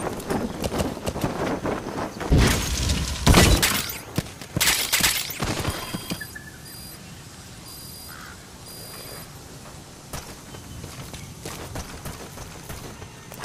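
There are no technical faults to describe anywhere in the audio.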